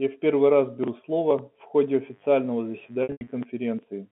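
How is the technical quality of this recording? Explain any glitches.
Two faults stand out over a telephone-band speech signal limited to roughly 150 Hz to 3.5 kHz.

From 1.77 s to 3.46 s there is a steady, raspy mains buzz at roughly 35 dB below the speech. Switching spikes on the 50 Hz supply leaked in, spreading harmonics well up the band.

From 3.03 s to 3.27 s there is packet loss with pitch repetition. The sound briefly holds and buzzes, then thins toward silence before resuming. About 180 ms of audio went missing across 240 ms, in runs up to 90 ms, and the receiver repeated the last pitch cycle to fill each gap.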